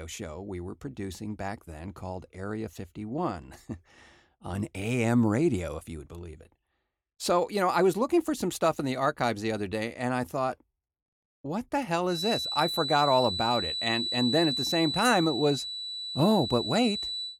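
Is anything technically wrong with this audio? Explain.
Yes. From 12.04 s to the end, a feedback whistle appears. A thin, steady tone at 4 kHz sits a few decibels below the speech and swells and fades slowly in level. The likely cause is a loudspeaker-to-microphone loop held right at the edge of feedback, ringing without running away.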